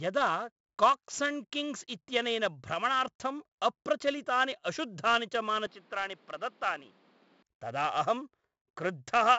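The whole clip carries 4-bit ADPCM compression, and the damage is heavy. Each sample is coded as a small step from a prediction, so a gritty hiss rides on every loud passage. Sharp attacks smear. Nothing sounds above 7.7 kHz, which fits a 64 kbps stream.

From 5.67 s to 7.43 s, the sound turns duller and boxier, with nothing above 5.6 kHz. The level drops by about 5 dB. A faint new noise floor appears, well below the speech. The change is abrupt, with no gap. The likely cause is an input switched to a poorer device.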